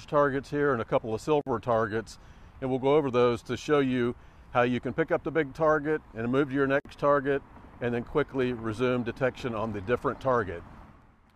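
Separately encoded pieces of this audio were joined without trimming, leaving a gap at a join of encoded pieces twice. Each encoder pass left its start-up delay and end-of-frame padding in place as silence. At 1.41 s, 52 ms of silence cuts into continuous sound; at 6.80 s the same happens for 52 ms. Each dropout has its edges smeared by the codec, and the sound resumes exactly where it broke off.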